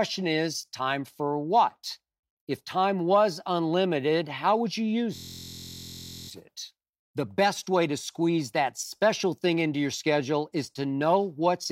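From 5.16 to 6.29 s, after "unlimited how would you", a system hang loop: the stalled system replays one 23 ms buffer, heard as a steady 43 Hz buzz.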